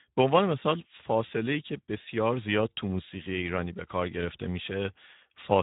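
From start to finish, the speech carries Speex codec damage. It is plainly audible. Speex is a CELP coder that rebuilds the voice from a compact excitation signal. Here that excitation is starved of bits, which points to a rate of around 11 kbps. Voices come out grainy, noisy and hoarse. The band is also cut hard, with nothing above 3.8 kHz. That leaves a narrow, telephone-like top end.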